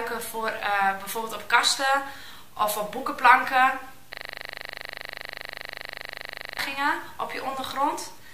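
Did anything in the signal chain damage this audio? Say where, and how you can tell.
Yes, a system hang loop at the driver or buffer stage: from 4.13 to 6.59 s one 40 ms chunk repeats exactly, about sixty times, giving a steady 25 Hz buzz. The waveform shows identical blocks, and the spectrogram shows vertical stripes with harmonics spaced 25 Hz apart.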